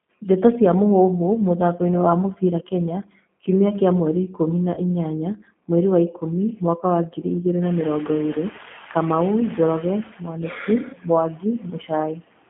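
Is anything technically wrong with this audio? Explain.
Yes. The audio has four kinds of fault, all on a speech clip.

Noise suppressor artifacts run throughout. The suppressor pulls down bands it judges to be steady noise, frame by frame, by about 18 dB, so the background sinks in pauses and swells beneath the talker. Unlike room noise, it pumps with the speech rather than sitting steady.

The G.729 codec is also present throughout and is plainly audible. It rebuilds speech from a vocal tract model, a pitch predictor and sparse pulses, which fits an 8 kbit/s G.729A stream. The band is confined to roughly 150 Hz to 3.4 kHz, and the voice sounds rough and synthetic. That constant texture separates it from the suppressor's intermittent pumping.

Speech is cut by the noise suppressor at 2.34–3.48 s, 4.28–4.40 s, 5.36–5.70 s, 6.12–6.23 s, 6.56–7.25 s and 9.57–12.23 s. The suppressor mistakes parts of the speech for background and turns them down, by about 17 dB at its deepest in the first event and about 18 dB in the last. 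Soft consonants and endings sound swallowed. The longest stretch, near the end, loses around a second of speech in total. These are dips in level, not added buzz. The room noise rises by about 25 dB near 7.5 s to sit about 18 dB below the speech.

VoIP packet loss concealed by the speech codec occurs at 4.74–4.81 s. About 30 ms of signal is missing, which fits three lost 10 ms frames. The decoder extends its last pitch and filter with falling gain, giving a brief, fading smear. Unlike a suppressor cut, it adds stretched sound instead of simply going quiet.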